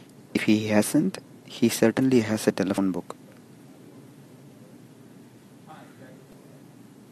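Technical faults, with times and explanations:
0.34–0.37 s, 2.75–2.78 s and 6.30–6.33 s: damaged data in a compressed stream. Corrupted bytes make the decoder misread frames and lose sync, producing a brief 30 ms glitch in the speech each time.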